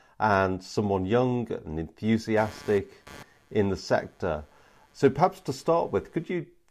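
Computer activity noise runs from 2.37 to 6.33 s of this speech clip. It is a buzz pulsing around 150 Hz, roughly 25 dB below the speech, produced as changing computer load shifts the audio circuit's shared ground.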